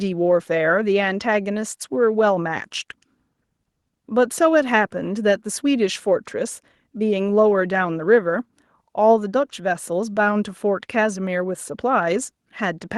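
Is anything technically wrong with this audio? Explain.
No, nothing technically wrong shows up anywhere in this speech recording.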